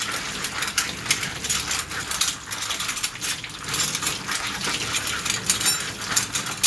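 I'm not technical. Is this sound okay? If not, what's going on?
Yes, no faults heard.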